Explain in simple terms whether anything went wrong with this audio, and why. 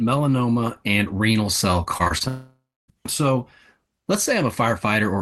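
Right after "and renal cell", from 1.97 to 2.22 s, there's repeated packet loss: four short gaps, each patched by stretching the last sound, so it turns choppy and robotic.

Then, from 2.28 to 2.90 s, comes a long network dropout. About 0.6 s is lost, and the filler buzz fades into roughly 0.28 s of silence, likely from the connection briefly cutting out.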